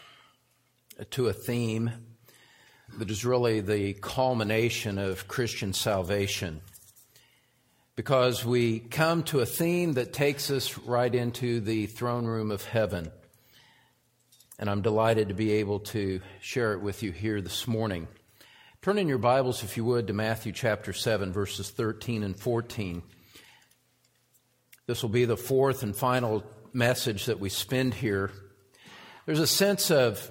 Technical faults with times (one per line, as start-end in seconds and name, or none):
none